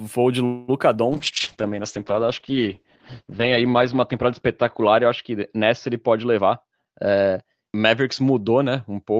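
From 0.45 to 0.70 s, a call audio freeze likely came from delayed packets draining the jitter buffer. The last sound stretches into a fading buzz for about 228 ms, then resumes where it stopped with nothing lost.

At 0.94 to 0.97 s, short concealed packet loss means about 20 ms never reached the decoder. The receiver patched it by extending the previous sound, leaving a brief smear or wobble.

From 1.12 s to the end, a call bitrate drop forces the encoder from 48 kbps down to 8 kbps, and audio bandwidth shrinks from 20 kHz to 8 kHz. The speech turns rough and muffled, bottoming out for about 2.4 s.

Between 6.35 and 7.79 s, a jitter buffer speed-up sheds surplus delay by cutting repeated pitch-period slices, roughly 200 ms in all. Speech runs at 115% speed at unchanged pitch, sounding hurried.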